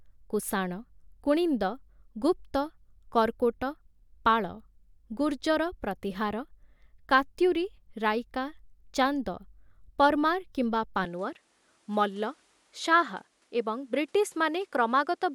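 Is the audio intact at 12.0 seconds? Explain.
No. From 11.05 s to the end, the speech loses its top. Nothing sounds above 12.1 kHz, and a faint new hiss sits about 40 dB down. The level holds steady with no gap. The input likely switched to a poorer device.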